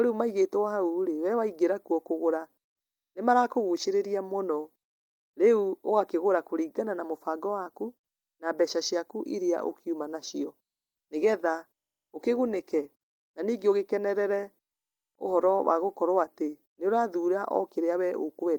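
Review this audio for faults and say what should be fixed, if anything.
Nothing here needs fixing, as there's no fault to be heard anywhere in the recording.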